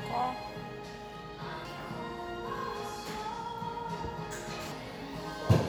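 Damaged data in a compressed stream occurs twice, at 1.65 s and again at 4.72 s. At each point a stretch of the compressed data has been corrupted, so the decoder cannot read the affected frames properly, loses its place in the stream and has to hunt for the next valid frame header before decoding can resume. Each break is heard as a brief chirp or blip cutting into the sound.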